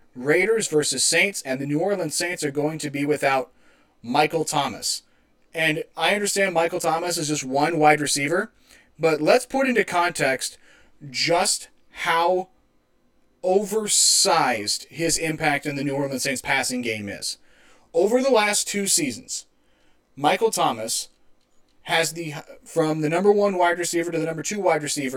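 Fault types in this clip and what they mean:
Channel delay (comb filtering): one channel lags roughly 20 ms before the mono sum, notching evenly from about 30 Hz, so speech sounds rough or doubled throughout.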